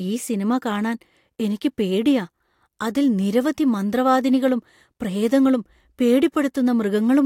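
No technical faults can be heard anywhere in this speech recording. There is no moment in it that calls for a timestamp or a repair.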